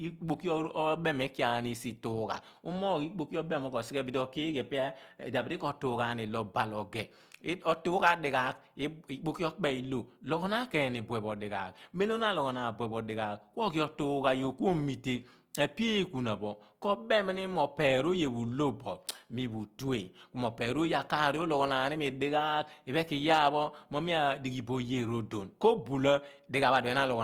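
Speech recording with plainly audible Opus compression throughout. The speech sounds rough and grainy, with noise filling bands rather than swirling, while content still reaches 20.3 kHz. This is likely fullband CELT-mode encoding, fitting a starved bitrate near 24 kbps.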